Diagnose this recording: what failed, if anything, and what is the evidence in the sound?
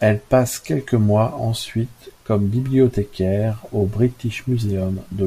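Nothing in this speech recording points to a failure at any stage of the chain. No event in the sound calls for a diagnosis.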